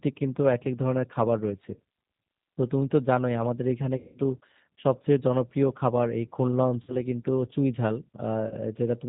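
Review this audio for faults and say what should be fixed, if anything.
Throughout, the speech sounds rough, slightly synthetic and dull, with nothing above 4 kHz. This is the G.729 codec, and the damage fits G.729A at 8 kbit/s. Prevent it by using a wideband codec such as G.722 or Opus at a higher bitrate.

Brief fading dropouts, stretched into a buzzy tone or coloured noise, occur at 1.74–1.78 s, 3.97–4.18 s, 6.82–6.97 s and 8.48–8.54 s. This is VoIP packet loss concealed by the speech codec: the decoder stretches its last pitch and filter over about 30, 180, 60 and 30 ms of missing audio, and the speech stays weakened just afterwards. Prevent it with a steadier network path, adequate jitter buffering, and forward error correction or packet redundancy.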